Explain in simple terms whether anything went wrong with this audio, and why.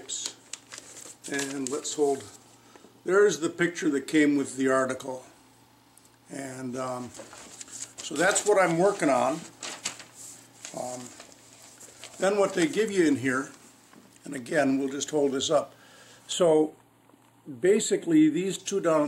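Yes, briefly. From 16.33 to 18.59 s there is channel delay (comb filtering): one side arrives a tiny fraction of a millisecond late, so mixing the sides cancels certain pitches, starting around 5 kHz. Unlike plain muffling, it sounds hollow and phasey.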